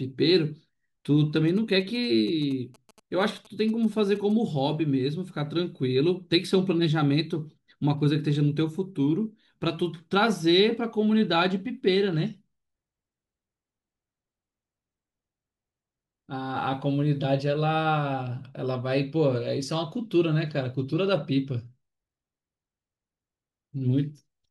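A nearby 2G phone sending GSM signalling bursts, picked up and rectified by the audio circuit, intrudes from 1.48 s to 4.32 s. It sounds like a galloping dit-dit-dit of short 217 Hz buzzes, sitting about 25 dB under the speech.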